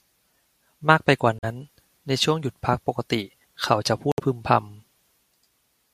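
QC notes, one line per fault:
1.39–1.44 s and 4.12–4.20 s: Bluetooth dropout. The speech cuts abruptly to silence for about 43 ms and then about 64 ms, and resumes further along as though it kept playing. The likely cause is audio packets reaching the headphones late and being discarded.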